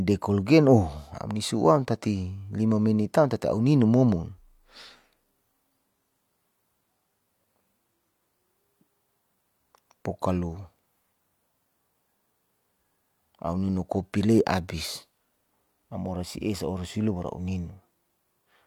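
A recording of speech, with no technical fault to report. Nothing in it calls for a time, a value or a cause.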